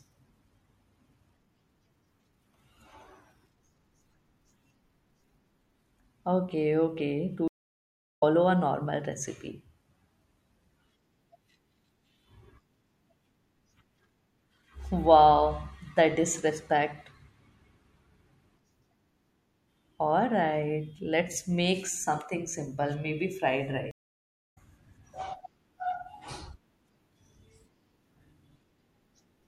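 At 7.48 s and 23.91 s the speech drops into silence for 0.74 s and 0.65 s: a stream reconnect, where the connection broke and a fresh decoder restarted mid-stream. Unlike a simple dropout, speech resumes roughly 0.5 s and 0.4 s later, skipping material.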